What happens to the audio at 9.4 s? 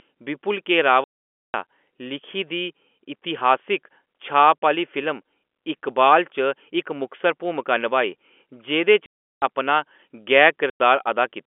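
At 9.42 s the speech returns from a gap of packet loss filled with silence, running from 9.06 s, about 360 ms, consistent with a run of 20 ms packets. The receiver inserted pure silence rather than concealment, so the hole is dead quiet with hard edges, not a smeared or repeated fade.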